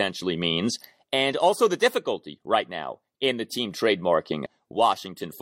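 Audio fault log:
4.46 s: damaged data in a compressed stream. Corrupt bytes make the decoder misread a frame and lose sync. Hunting for the next header causes a brief blip.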